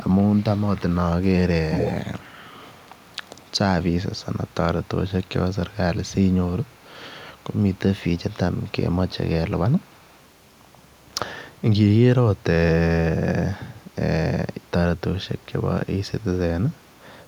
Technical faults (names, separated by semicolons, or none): echo leak